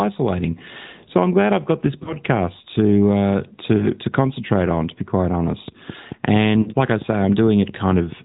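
AMR narrowband mobile codec damage runs through this speech clip. Nothing passes above 4 kHz, and the vocal-tract model leaves the voice plainly buzzy and synthetic, which points to a mid-rate mode around 10 kbps. Lost AMR speech frames occur at 2.04–2.16 s just after "glad I've got this", at 3.78–3.87 s just before "to concentrate on", and at 6.62–6.71 s. Each time about 20 ms, 20 ms and then 40 ms of data went missing, so the decoder reused its last pitch and vocal-tract settings at falling gain, causing a short warbling dip before the voice returns weak or rough for a moment. A train of clicks runs from 5.68 s, just after "be quite", to 8.13 s. It is roughly ten similar pops at a regular 4.5 per second, peaking around 5 dB above the speech and audible in pauses too, likely from interference by nearby equipment or a faulty connection or power supply.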